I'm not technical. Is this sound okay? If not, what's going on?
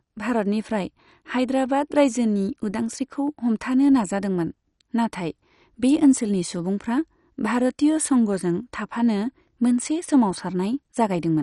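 No. Throughout, the speech sounds dull and clearly gurgly, with the crisp top end missing, which is likely from MP2 compression squeezed too hard.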